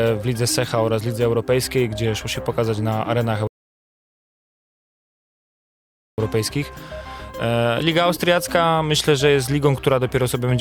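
At 3.47 s the sound drops abruptly into silence and stays silent until 6.18 s, then picks up exactly where it broke off, with nothing skipped. This is a rebuffering stall: playback outran the audio that had been downloaded, so the player halted and waited for more data before continuing. No content is lost, but the gap adds about 2.7 s to the running time.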